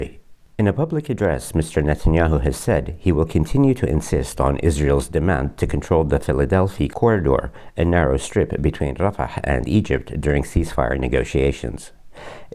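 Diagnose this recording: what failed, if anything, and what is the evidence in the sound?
Nothing here failed, as far as I can hear; no stage in the chain leaves any trace of trouble anywhere in the recording.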